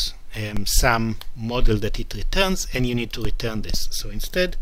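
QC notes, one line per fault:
0.57 s and 3.25 s, DC step: the signal's zero line jumps suddenly by about -13 dBFS and then slowly drains back toward centre as a 2 Hz high-pass bleeds it away. Each sudden jump comes through as a low thump, while the sound itself carries on unchanged.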